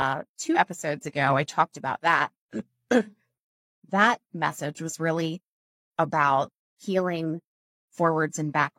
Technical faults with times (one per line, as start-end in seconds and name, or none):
0.47-0.57 compressed frames skipped